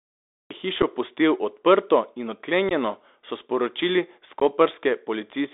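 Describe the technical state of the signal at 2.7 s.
At 2.7 s the speech drops out in an unconcealed Bluetooth headset packet loss between 2.69 and 2.73 s. About 15 ms of audio from a few lost packets is replaced by silence or an idle pattern, with abrupt edges rather than a smoothed or filled gap. Underneath, the Bluetooth CVSD headset codec confines the speech to roughly 300 Hz to 3.7 kHz, adding granular hiss and scratchy sibilants. Unlike ordinary low-pass filtering, this one-bit delta coding distorts loud high sounds.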